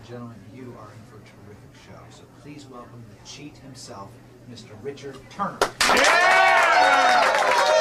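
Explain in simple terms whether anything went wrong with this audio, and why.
Nothing went wrong here: the signal stays steady and intact the whole way, with no dropouts, interruptions or damage a listener would notice.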